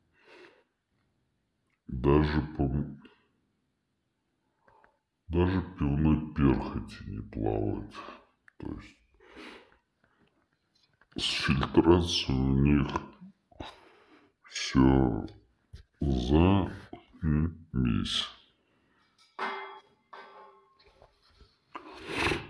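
Wrong sample rate runs throughout the clip, from start to finish. The audio is played back slower than it was captured, with no rate conversion, so speed and pitch drop together by the same ratio. Everything runs at about 0.69 times normal speed and sits about 6.5 semitones low, giving a heavy, dragging, lowered sound. That ratio fits material recorded at 32 kHz being played out at 22 kHz.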